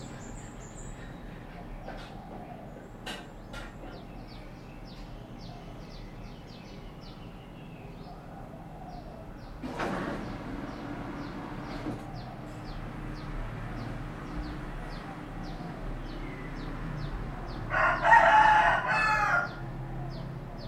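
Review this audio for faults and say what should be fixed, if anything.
Nothing in this audio needs to be fixed, as no faults can be heard.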